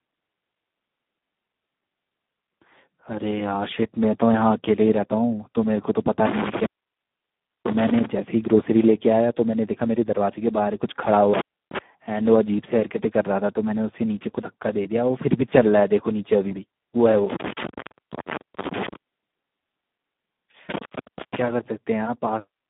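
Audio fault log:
Throughout: Speex codec, heavy damage. The speech sounds hoarse, noisy and near-robotic, confined to roughly 150 Hz to 3.6 kHz, with nothing above 3.8 kHz, which fits an 8 kbps setting.
6.26–8.06 s, 11.34–11.79 s, 17.30–18.96 s, 20.69–21.41 s: intermittent contact. The signal drops out with crackle at each edge as a loose connection opens, for roughly 1.0 s, 0.3 s, 1.0 s and 0.5 s respectively.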